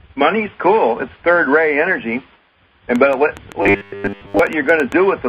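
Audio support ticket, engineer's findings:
Train of clicks, 2.96 to 4.93 s: roughly ten irregularly spaced pulses, about 5.6 per second, peaking about 5 dB above the audio. Likely external interference or a struggling interface. Unlike dropouts, nothing is removed.

Robotic sound from repeated short buffers, 3.62 to 4.39 s: a rigid metallic 100 Hz buzz, with most of the audio replaced by repeats of a roughly 10 ms buffer. Likely late-arriving buffers. The pitch stays fixed, unlike the clicks.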